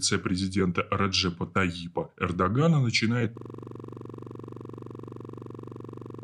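From 3.38 s to the end, the speech gives way to a rapid mechanical rattle: a single 42.67 ms fragment repeating about 67 times at 23.4 Hz, too fast to hear as separate syllables but too slow to blur into a tone. This is a system hang loop. The machine or its audio driver stalled, and the sound hardware kept replaying the last ring buffer it held, a length that fits a 2048-sample buffer.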